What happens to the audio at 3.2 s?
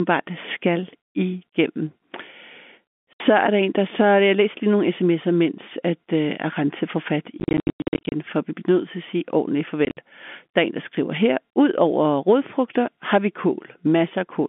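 At 3.2 s the speech resumes after a gap. From 3.13 to 3.2 s there is packet loss filled with silence. About 70 ms of audio never arrived, and the receiver played nothing in its place. That length fits seven 10 ms packets. The speech cuts off abruptly and comes back on "er der en der". Both edges of the dead hole are hard.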